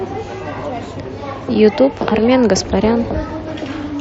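No technical faults can be heard anywhere in the speech signal.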